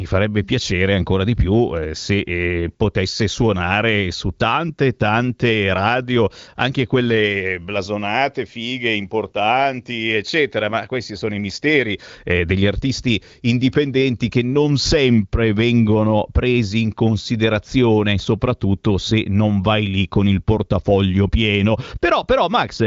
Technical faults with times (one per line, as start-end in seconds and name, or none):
none